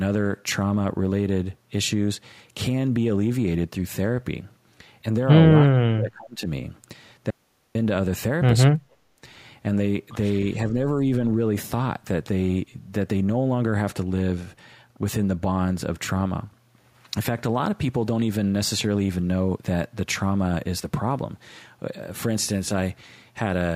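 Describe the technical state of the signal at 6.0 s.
Speech suppressed in double talk: an echo canceller likely mistook the talker for echo and cut the speech by roughly 35 dB from 5.67 to 6.48 s.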